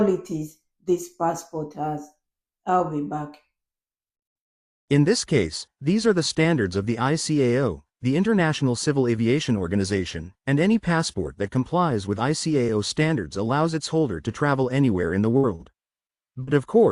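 From 15.37 s to 16.49 s, the sound breaks up with repeated packet loss, giving a robotic sound. Around eight short holes open in quick succession. The longest lasts about 59 ms. Each hole is patched by stretching out the sound just before it. Roughly a fifth of this stretch is filler rather than real audio. The result is choppy, with small pieces missing.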